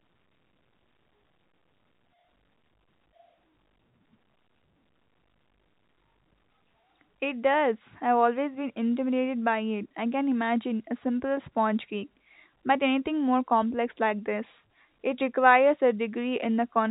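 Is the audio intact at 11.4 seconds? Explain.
Yes, the audio is intact at 11.4 seconds, with nothing there beyond the ordinary narrow band of G.711 telephone coding, which carries nothing above about 3.8 kHz.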